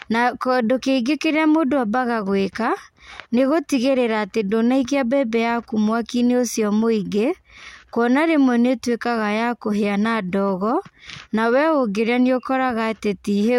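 Nothing goes wrong anywhere in this bit of speech, so there's no technical fault to point to at any moment along the way.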